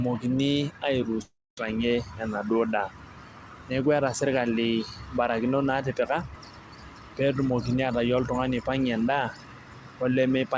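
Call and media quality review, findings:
Long network dropout, 1.22 to 1.58 s: about 0.36 s of speech lost. The last sound gets stretched into a fading buzz, then drops to near-silence before audio resumes later, with the gap never recovered. Likely packet loss on the network leg, with the jitter buffer's concealment smearing the last good frame until it gave up. Band tops out at 8 kHz throughout, as you'd expect from G.722 at 64 kbps.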